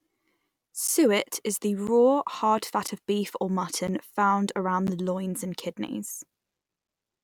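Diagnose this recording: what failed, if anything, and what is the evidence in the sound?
The failure is periodic USB or driver dropouts, at the driver or buffer stage. Brief silent gaps of about 10 ms tick through the speech once per second, from 0.87 s to about 6.88 s, roughly seven times. A recurring background task stalls the audio path, dropping samples each time.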